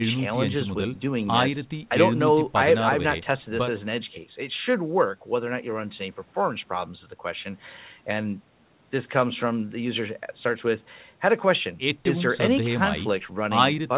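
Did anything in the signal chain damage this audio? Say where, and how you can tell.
No, nothing in the signal chain damaged this audio; the top end stopping near 4 kHz is simply the normal band limit of the call codec.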